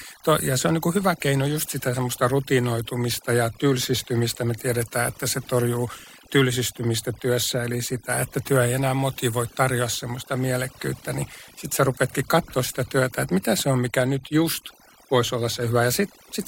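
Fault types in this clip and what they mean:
Overdone noise removal: Heavy noise reduction leaves near-silent gaps with twinkling specks throughout. Quiet parts of the speech vanish.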